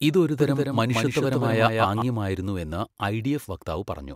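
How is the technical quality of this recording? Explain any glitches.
The recording has one clear fault, a doubled audio track from 0.4 s to 2.0 s. A second, slower capture path likely fed the same speech into the mix again, so a copy around 5 dB quieter trails by roughly 200 ms, with no room decay, and cuts in and out abruptly.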